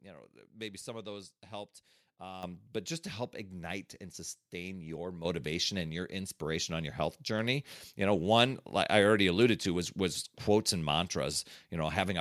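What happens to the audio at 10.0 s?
Nothing goes wrong at 10.0 s: the speech continues intact there, with no dropout, click, distortion or other fault at that moment.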